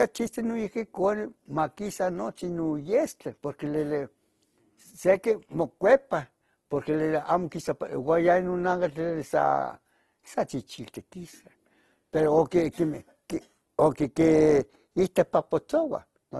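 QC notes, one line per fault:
Throughout, Opus compression, likely: the speech sounds rough and grainy, with a plainly audible noisy texture laid over tonal parts, and nothing is heard above about 12.1 kHz. Unlike MP3 damage, there is little swirling or watery gapping; the coder keeps each band's energy and fills starved bands with folded or noise content, so detail turns to grit. That super-wideband limit fits Opus music mode at a rate around 16 kbps.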